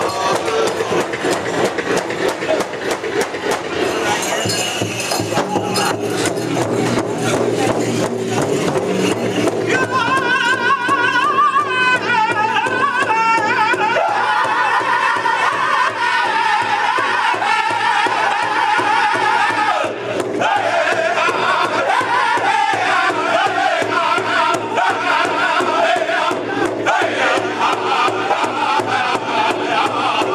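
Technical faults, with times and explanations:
Throughout, gain pumping: gain swings by around 10 dB, pulling loud and soft parts closer in level and squashing the sound, likely excessive input gain driving a fast limiter.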